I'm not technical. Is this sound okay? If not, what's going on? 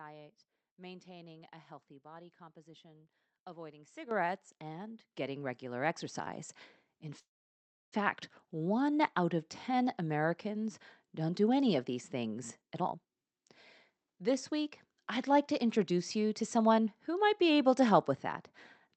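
No, there are a few problems.

Microphone volume stepped up: at 4.11 s, between "healthy body composition avoiding" and "and getting regular", the sound suddenly gets louder, and again at 5.13 s and 6.15 s, just after "and getting regular". Voice and background jump together in a single step. A gradual fade would creep up instead.

Call audio freeze: from 7.19 to 7.94 s the sound stalls. A brief fading buzz turns into about two-thirds of a second of silence, then speech resumes where it stopped. Nothing is lost; a pause is inserted, likely because data was held up on the network.

Jitter buffer speed-up: from 12.61 to 13.40 s speech runs about one and a half times normal speed, then slightly fast (about 8% quicker) from 13.97 to 17.42 s, ending just before "able to". Unlike fast-forwarding, the pitch stays the same, so it just sounds hurried.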